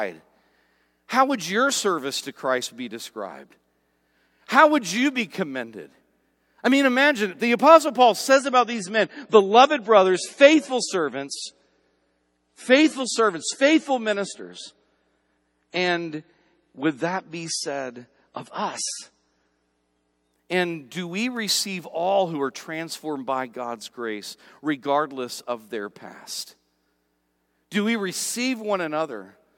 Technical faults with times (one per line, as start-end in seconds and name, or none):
8.32-20.32 adaptive stream at a lower bitrate